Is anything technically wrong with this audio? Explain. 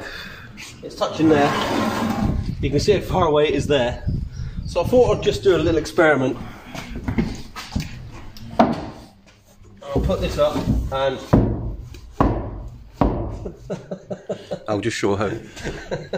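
Yes. At 6.32 to 6.34 s there is damaged data in the compressed stream: corrupted bytes cause the decoder to misread the affected frames and lose sync until it finds the next valid frame header. The result is a brief chirp or blip of about 20 ms.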